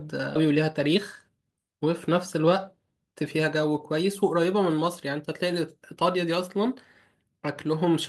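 At 0.35 to 0.37 s there is a skip ahead. Roughly a second of speech never reaches playback, either lost in transit or discarded by an overflowing jitter buffer, and the audio on either side is butted together with no fill. It sounds like an abrupt jump in the speech. On a waveform the envelope changes shape instantly at the splice with no silent gap, and a spectrogram shows the harmonic and formant pattern changing from one column to the next instead of gliding.

From 0.45 to 2.87 s a jitter buffer speed-up follows. The buffer is holding more audio than its target, so the receiver repeatedly trims short slices of one or a few pitch periods, removing around 200 ms in total. The speech runs at about 108% speed with its pitch unchanged and sounds slightly hurried. On a spectrogram the harmonics keep their spacing while syllables and pauses are compressed in time.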